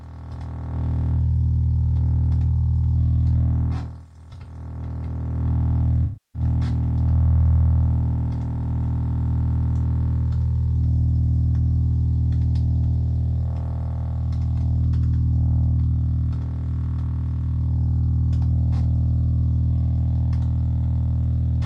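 AAC frame loss with concealment at 6.04 to 6.42 s: the decoder rebuilds missing frames from the last good spectrum, so the sound smears, turns noisy and fades before recovering.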